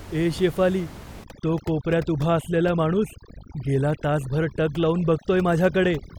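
Overdone noise removal from 1.24 s onward cuts bands near its noise estimate, turning room noise into twinkling near-silence.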